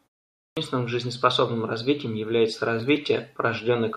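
The output device appears to drop into a sleep state during the opening 0.44 s of silence in this speech clip and needs about 128 ms to wake again, so the clipped start after a pause swallows the beginning of the sound from 0.44 to 0.57 s, and speech begins abruptly without its first sounds.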